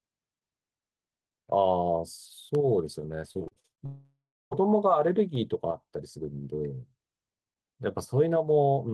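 At 2.55 s a block of digital silence drops the speech to zero for well under a millisecond, about 0.67 ms, which fits a block of roughly 32 samples going unfilled. Because the cut and return are instantaneous with no fade, it is heard as a single sharp tick rather than a hole. That abruptness separates it from network faults, which patch their gaps.

From 3.33 to 3.82 s repeated packet loss gives a choppy, robotic texture. Gap after gap is bridged by stretching the previous sound, the longest about 40 ms, so roughly 40 percent of this stretch is filler. The result is a stutter with pieces missing, not a clean cut.

From 3.86 to 4.53 s the sound smears into a fading buzz and then falls to silence for about 360 ms before the speech resumes, with a portion skipped. This is most likely a long network dropout, where the receiver extends the last audio until it gives up. The fade-out and the much longer gap set it apart from the brief ticks.

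At 5.35 s a second block of digital silence, about 0.48 ms long, gives another isolated click with no smearing around it.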